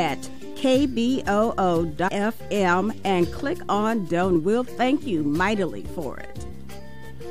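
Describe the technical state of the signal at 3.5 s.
At 3.5 s the signal is intact, with no dropout, distortion, glitch or other fault to be heard at that point.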